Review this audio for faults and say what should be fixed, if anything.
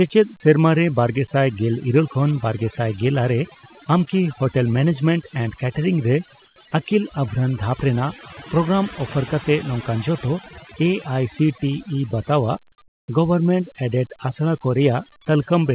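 Overdone noise removal runs through the whole clip. The suppressor is cutting individual frequency bands whenever they sit close to its noise estimate, so the background drops and breaks up into twinkling specks, and the quieter parts of the speech are removed along with it. The call path is narrowband, with nothing heard above 4 kHz as fits G.711. Reduce the suppression strength or switch to a gentler mode so that low-level speech detail survives.

Comfort noise in place of the background is heard twice: from 6.46 to 6.56 s, for 100 ms, and from 12.88 to 13.08 s, for 200 ms. In both gaps the background, which sits about 37 dB below the loud passages, is replaced by a steady, featureless hiss. The level drops by about 7 dB in the first gap and about 12 dB in the second, and detail returns when sound resumes. This is likely discontinuous transmission, with the receiver synthesising noise during pauses flagged by the voice detector. 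Disable DTX on the sender, or tune the comfort-noise level to match the real background.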